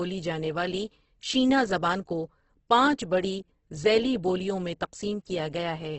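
Throughout the speech, heavy Opus compression is the likely cause of a grainy, rough texture in which tonal detail dissolves into noise. On a spectrogram everything stops at a flat ceiling of 8.1 kHz, and the harmonics smear into speckle, which fits a bitrate near 12 kbps.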